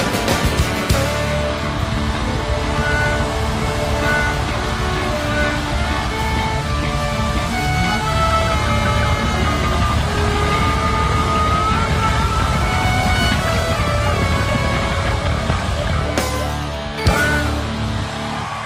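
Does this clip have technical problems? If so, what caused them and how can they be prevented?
No, nothing in this one points to a technical problem, so there's nothing here that needs fixing or preventing.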